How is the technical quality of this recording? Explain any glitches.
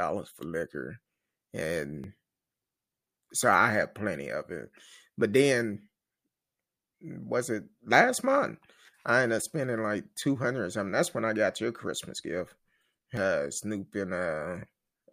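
Two brief glitches interrupt the speech, at 2.04 s and 13.17 s. Each is a jump where the sound moves abruptly forward, skipping roughly 10 ms with no gap of silence. The likely cause is a dropped buffer (overrun): the recording software fell behind, the hardware overwrote that block, and the audio on either side was butted together.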